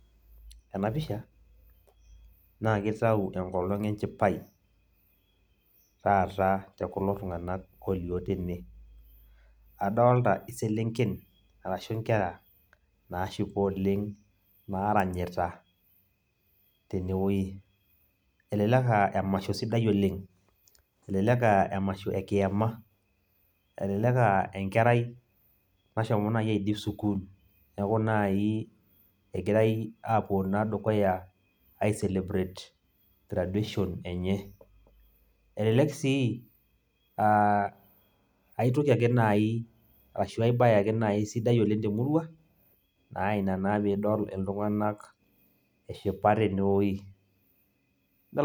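No technical faults can be heard anywhere in the speech. There is nothing here to place in time or trace back to a cause.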